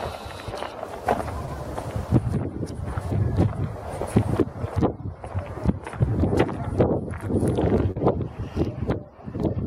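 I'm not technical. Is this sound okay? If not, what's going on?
No. Short concealed packet loss occurs at 1.45–1.49 s and 7.91–7.97 s. Bits of audio, 20 and then 40 ms, arrived too late, so the receiver guessed the missing part, causing brief smears.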